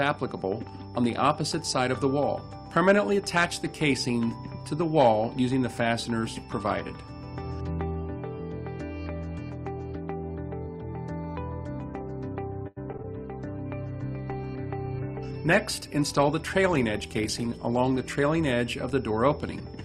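Around 12.67 s the sound starts breaking up with repeated packet loss, which gives it that robotic edge. Through to 13.05 s there are four separate holes, the longest about 91 ms, and roughly a third of that stretch is made-up audio. The receiver keeps stretching the last bit it had to cover each gap. Then the next dropout lands right away, so you get a choppy stutter with small chunks missing.

Just after, from 13.39 s, there's a call bitrate drop that lasts until 19.02 s. The encoder gets squeezed hard, and the coding turns coarser, which fits a fall from about 32 kbps to about 18 kbps. At the same time the top end gets chopped from around 20 kHz down to 12 kHz. For about 4.6 s at the bottom of that dip the audio sounds rough and a bit muffled, with the air gone from the highs.

Inside that dip, between 15.78 s and 16.59 s, the jitter buffer speed-up kicks in. The receiver had more queued up than it wanted, so it trimmed out tiny pitch-period slices over and over, around 70 ms in total. 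Playback runs about 8% fast for that bit while the pitch stays put, so the timing feels hurried.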